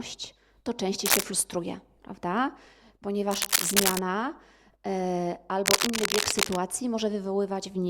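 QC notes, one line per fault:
1.06–1.23 s, 3.30–3.99 s and 5.66–6.56 s, cable scratch noise: likely a worn cable or connector shifting, its contact resistance jumping about. That lays ragged scratchy bursts over the speech, louder than it between "to częściej" and "frustruje prawda", then roughly level with it.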